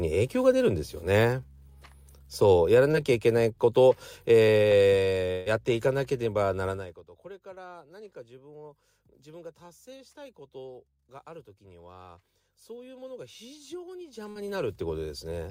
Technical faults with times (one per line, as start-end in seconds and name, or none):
2.91-2.95 short concealed packet loss
5.31-5.58 burst of packet loss
6.68-7.04 zipper noise
13.98-14.90 zipper noise
14.31-14.37 short concealed packet loss